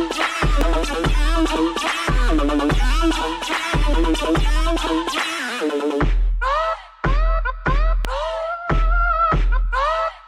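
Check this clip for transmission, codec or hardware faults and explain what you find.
There are two loud pops, one at 0.61 to 0.63 s and another at 8.05 to 8.07 s. Each is a single sharp hit, roughly 15 dB above the surrounding sound, which keeps going underneath. These are likely a voltage spike from a plug, switch, static discharge or driver hiccup getting into the signal chain, where the downstream circuitry rounds the impulse into a brief thump before things settle.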